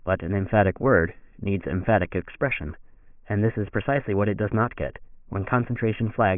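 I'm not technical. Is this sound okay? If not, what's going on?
Yes, nothing stood out as wrong anywhere in this recording when I listened to it.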